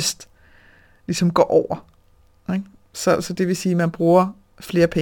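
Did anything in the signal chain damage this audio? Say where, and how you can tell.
Yes. A crude rate conversion, consistent with 44.1 kHz to 48 kHz by repeating nearest samples without filtering, leaves a gritty, inharmonic fizz roughly 30 dB below the speech from 2.50 s onward.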